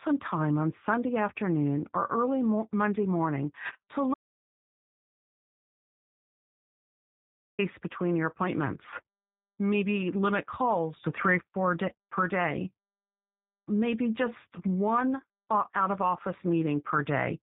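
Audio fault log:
throughout G.729 codec: the speech is rebuilt at 8 kbit/s from a short-term vocal tract filter, a pitch predictor and a few pulses per subframe, so it comes across as intelligible but rough, buzzy and slightly synthetic, with plainly audible coding damage. On a spectrogram nothing appears above 4 kHz, leaving a hard ceiling, and the harmonics below it look smeared and unsteady from frame to frame rather than cleanly striped.
4.14–7.59 s audio dropout to silence: the speech cuts off mid-flow and returns about 3.44 s later, and the gap holds no room tone, hiss or codec texture, only dead silence. Whatever was said in that stretch is lost. This likely comes from the input being lost for a while, through a disconnected device, a failed link or an accidental mute, while silence kept being written. The waveform shows a flat line, and the spectrogram shows a solid black band across every frequency.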